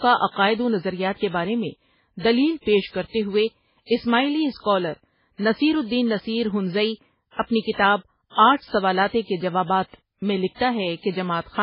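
Throughout, heavy MP3 compression leaves nothing above 5.3 kHz and makes the speech swirl watery. That flicker, unlike a plain low-pass filter's smooth dullness, points to a likely very low bitrate, around 16 kbps.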